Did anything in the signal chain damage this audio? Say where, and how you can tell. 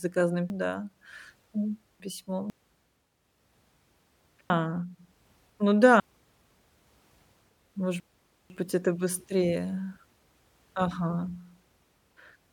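Yes. Chunks out of order, from buffering or transport: 500 ms blocks of speech play late, displaced by three, two and one chunks, at 0.5–2.5 s, 4.5–6.0 s and 7.5–8.5 s (before "быть это"). Nothing is lost, but each jumbled passage has three hard joins.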